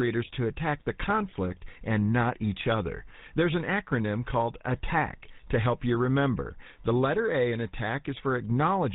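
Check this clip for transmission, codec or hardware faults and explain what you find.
The clip shows one codec fault that runs through the whole recording.

GSM full-rate codec damage is present from start to finish. Keeping only sparse pulse excitation through a vocal-tract model, consistent with 13 kbps full rate, gives the speech a buzzy, gravelly roughness and a hard cutoff at 4 kHz. That grit separates it from simple telephone band-limiting, which sounds muffled but clean.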